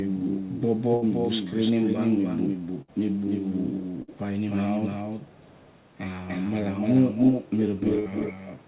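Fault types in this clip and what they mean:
Doubled audio track: A second full-band copy of the whole sound runs throughout, roughly 300 ms behind and about 5 dB quieter. It likely comes from a slower second capture path. Unlike echo, it stays steady and complete, with no thinning, chopping or room colour.
Echo leak: A delayed copy appears only in scattered stretches, likely because a far-end echo canceller let some of its loudspeaker sound through. It lags 353 ms at first, faint at about 30 to 35 dB down, then 250 ms and nearly as loud as the speech near the end.
Burst of packet loss: At four points, about 60 ms of sound goes missing. Each gap is bridged by roughly 55 to 60 ms of the last sound held and fading, as a buzz or hiss, before the audio resumes further on. That fill is what separates it from a clean silent dropout.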